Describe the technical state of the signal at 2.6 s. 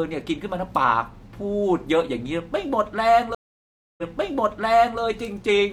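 At 2.6 s the speech signal is intact, with no audible fault at that point.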